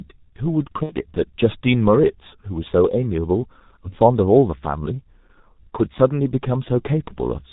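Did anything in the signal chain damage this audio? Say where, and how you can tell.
Yes, at the codec stage, throughout. The whole clip has the dull, hoarse, band-limited character of G.723.1: nothing above about 4 kHz, consonants smeared, and a rough, grainy texture on voiced sound. The damage is heavy, and the sparseness fits its 6.3 kbit/s mode. The codec works in 30 ms frames and updates its model of the voice slowly, so fast articulation gets blurred and averaged rather than tracked.

There's also VoIP packet loss concealed by the speech codec, at the network stage. From 0.83 to 0.95 s the speech turns into a stretched tail, a buzzy tone or coloured noise, that fades out, which fits two lost 30 ms frames plus the decoder's recovery. At 3.90 to 3.96 s there's a shorter version, about one frame's worth. With no packets arriving, the decoder repeats its last pitch and filter at falling gain. 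Because each frame builds on the previous one, the voice stays weak briefly after packets resume.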